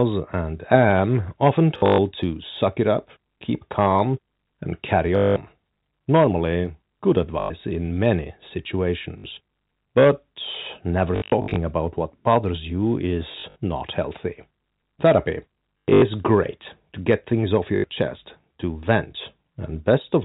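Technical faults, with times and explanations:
1.78–1.98 s, 5.16–5.36 s (after "keep calm and carry"), 7.4–7.5 s (before "in many"), 9.18–9.24 s, 11.16–11.56 s, 13.32–13.56 s (between "about what bothers you" and "not healthy"), 15.85–16.02 s, 17.76–17.84 s: packet loss with last packet repeated. Lost stretches of 60 to 240 ms, some scattered, were filled by replaying the previous packet. The runs give a robotic stutter buzzing near 50 Hz, which fits 20 ms packets, over the telephone-band G.711 audio.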